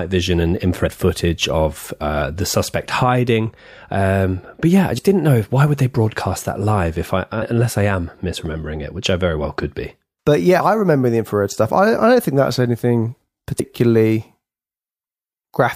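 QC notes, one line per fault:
0.82–0.88 s, 4.97–4.99 s, 7.41 s, 10.59 s, 13.59 s: compressed frames skipped. The speech jumps ahead by roughly 70 to 150 ms at each join, not a silent gap.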